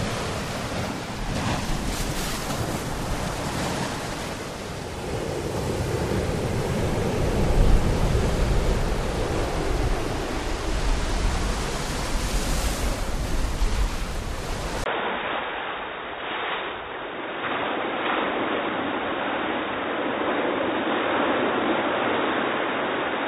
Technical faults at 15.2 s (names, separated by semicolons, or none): input switched to a poorer device